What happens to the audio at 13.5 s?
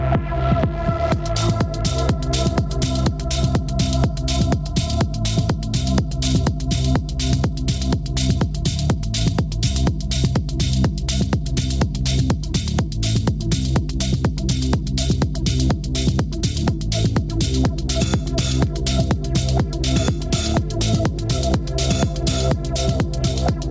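At 13.5 s, as throughout the clip, gain pumping is audible: the input gain is likely set far too high, so a fast limiter pulls the level down by around 10 dB on each loud sound, squashing the dynamics. The audio also stops near 8 kHz, which fits the call's G.722 path.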